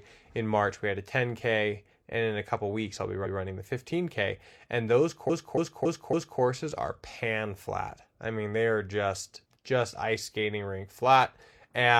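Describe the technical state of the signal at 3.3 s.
At 3.3 s the signal has repeated frames: right after "couple weeks I'll be", the span from 3.21 to 3.35 s plays twice. That 139 ms block, which fits a run of about three compressed frames, was decoded again, producing a stutter and lengthening the speech by 139 ms.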